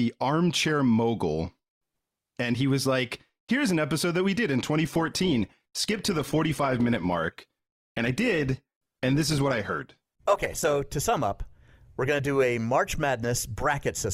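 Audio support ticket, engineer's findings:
Adaptive stream at a lower bitrate, 4.83 to 10.83 s, after "that we did in" until "to sum up we're". Abrupt gapless drop: heavier codec artefacts, content still reaching 20.3 kHz. Player switched renditions on a slowed connection; consistent with Opus falling from 64 to 16 kbit/s.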